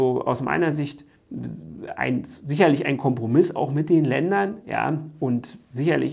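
Nothing technically wrong turns up anywhere in this audio, so there's no fault to point to and no cause to chase down.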